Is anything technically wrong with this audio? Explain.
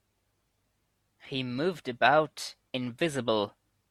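No, I can't hear anything technically wrong here.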